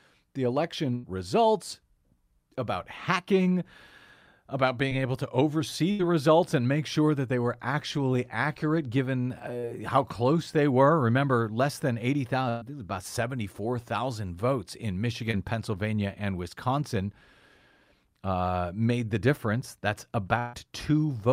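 A burst of packet loss at 0.95 to 1.05 s drops about 80 ms of the speech stream; the receiver stretches the last sound and fades it, leaving a held buzz or dying hiss before speech resumes further on. Short concealed packet loss at 4.89 to 4.93 s, just before "able to oversee", briefly smears the sound. Another burst at 5.91 to 6.01 s loses about 80 ms. At 9.59 to 9.65 s, between "were actually accurate given" and "how close they were", about 40 ms is patched with a wobble. Bursts at 12.49 to 12.63 s, after "less than", and 20.39 to 20.55 s cut about 120 and 140 ms, each bridged by a fading continuation. A short concealed loss at 15.31 to 15.35 s leaves a brief smear.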